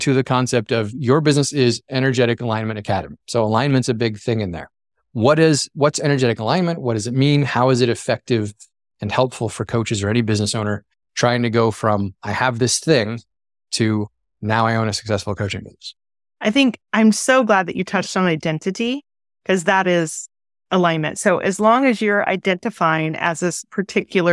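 Listening to the speech in this recording, nothing stood out as a technical problem.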